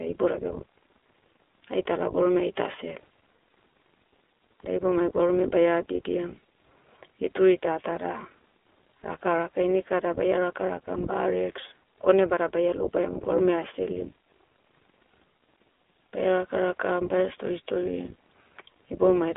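The iLBC codec artefacts run through the whole speech clip. The sound is confined to a 250 Hz to 3.5 kHz telephone band, with a plainly rough, synthetic texture. Each 20 ms frame's excitation is coded independently, which fits iLBC's 15.2 kbps mode.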